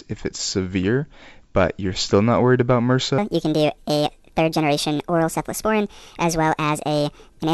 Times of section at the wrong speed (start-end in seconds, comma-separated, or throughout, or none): 3.18-7.54